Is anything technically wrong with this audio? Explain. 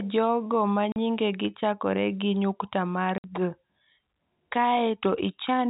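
Yes. The speech drops abruptly to dead silence twice. The first is at 0.92 to 0.96 s, right after "jogo ma" and before "nyingegi chakore gi nyukta". The second is at 3.18 to 3.24 s, after "chakore gi nyukta mar". This is packet loss filled with silence. Audio packets never arrived, and the receiver played nothing in their place. The 40 ms and 60 ms holes fit two and three lost 20 ms packets. The waveform is cut off and restarted mid-cycle, leaving hard edges against the narrowband G.711 telephone sound.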